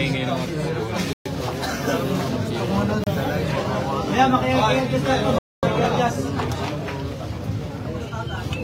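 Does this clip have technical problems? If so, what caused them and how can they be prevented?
Yes. The sound drops to silence at 1.13 to 1.26 s (125 ms), 3.04 to 3.07 s (30 ms) and 5.38 to 5.63 s (245 ms), each a likely Bluetooth stall where delayed packets emptied the receiver's buffer. Reduce radio interference and keep the devices close.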